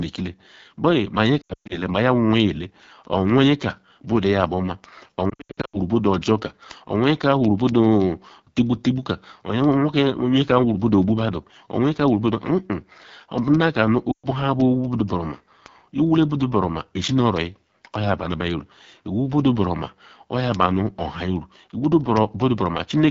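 From the start the whole speech track carries AMR wideband (HD Voice) codec damage, plainly audible as a rough, raspy, buzzy texture, which fits the low 8.85 kbit/s mode. At that rate the pulse-driven vocal tract model has too few bits to follow the voice closely. On a spectrogram the energy stops sharply near 7 kHz, and the 6.4 to 7 kHz band is a smooth, noise-like wash without harmonic lines.

From 0.12 s to 23.07 s a thin tick repeats about every 70 ms, a few hundred in all, some sharp and some faint. These are word clock ticks. The receiving device runs on its own clock, off by roughly 300 ppm from the sender, so each time the two clocks slip past each other a single sample is dropped or repeated. On a waveform each tick is a one-sample jump. On a spectrogram it is a thin vertical line, and the lines are evenly spaced across the whole clip.

Between 1.41 s and 1.83 s lost AMR speech frames scatter 220 ms of gaps over 280 ms, with the longest run at 120 ms. 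The decoder repeats the last good pitch and vocal tract settings at falling gain, so the sound smears, warbles, and sinks toward silence before it returns briefly rough. The spectrogram shows frozen, stretched harmonics fading out in blocks.

From 5.29 s to 5.78 s lost AMR speech frames come back, with 320 ms lost across 440 ms and runs of up to 80 ms. The sound keeps breaking into short smeared dips. The waveform shows repeated notches where the amplitude decays. The count of losses fits roughly sixteen 20 ms frames.

At 14.11 s to 14.26 s there are 120 ms of lost AMR speech frames. The sound briefly drones on one held spectral shape and then fades nearly to nothing. On the waveform this appears as a short decaying plateau, and on the spectrogram as flat, unchanging bands that fade out.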